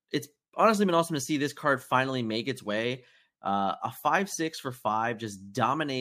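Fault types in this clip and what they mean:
There are no fault types in this clip.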